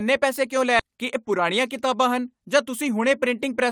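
At 0.79 to 0.81 s the speech jumps forward. This is a skip ahead. About 0.7 s of audio was dropped while later audio was already queued. There is no filler gap. The two sides are spliced almost directly, so part of the speech vanishes abruptly.

From 0.9 to 1.95 s comes a jitter buffer speed-up. The buffer held too much audio after the jump. The receiver trimmed short pitch-period slices repeatedly, removing about 70 ms. Speech runs at 106% speed with unchanged pitch and sounds slightly hurried.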